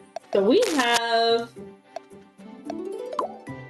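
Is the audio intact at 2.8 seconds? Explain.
No. Gain pumping runs through the whole clip, including 2.8 s, likely from gain set far too high with a fast limiter clamping each loud sound. The level swings by around 15 dB, and dynamics sound squashed.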